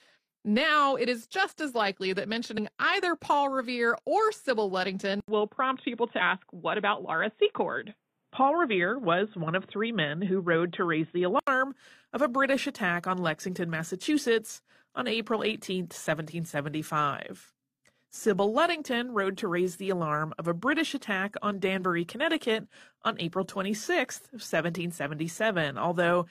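Speech, with two faults. At 2.54 to 2.59 s, right after "just as likely that", compressed frames are skipped: about two frames of 42.7 ms, roughly a tenth of a second, vanish. From 5.20 to 11.47 s the sound turns dull and boxy, with nothing above 3.8 kHz, faint new background noise and an 80 ms waveform gap at the start, likely from the input switching to a poorer device. On a spectrogram this span shows a flat ceiling at 3.8 kHz.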